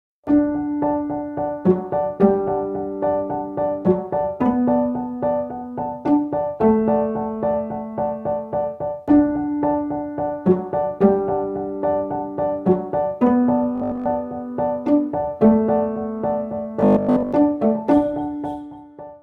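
Robotic sound from repeated short buffers appears at 13.76 to 14.08 s and 16.81 to 17.33 s, where the audio becomes a rigid, metallic buzz locked at 50 Hz. Most of the real audio is skipped there, likely because a 20 ms buffer is replayed while new data arrives too slowly. Unlike plain dropouts, it never falls silent.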